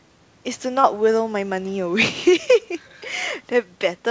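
Throughout the speech, the gain is pulled down under each louder syllable, a swing of a few decibels; this gain pumping likely comes from a fast limiter acting on excessive microphone gain. From 0.82 to 0.86 s a brief smeared wobble interrupts the sound: short concealed packet loss, where about 20 ms went missing and the receiver bridged it by extending the preceding sound before blending back.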